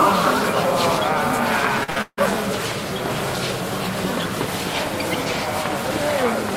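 From about 1.83 to 2.22 s there's a burst of repeated packet loss, and you get that robotic sound. Data kept dropping out, four gaps in quick succession, the longest around 157 ms. Each hole got papered over by stretching the last bit of sound forward, so roughly two-thirds of that stretch is concealment rather than real audio. It comes across choppy, with chunks missing.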